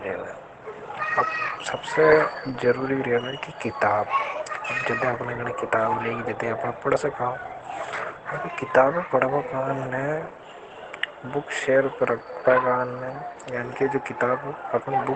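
Opus compression throughout: the speech is muffled and hoarse with nothing above 8.8 kHz, likely from the codec's SILK speech mode at about 16 kbps.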